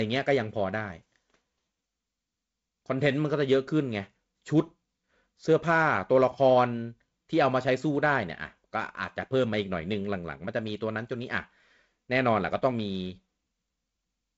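The speech carries no technical faults, arriving through G.722 wideband telephone coding at 48 kbit/s, which leaves nothing above about 7.7 kHz and adds only the light coding noise expected when the lower band runs with fewer bits at that rate.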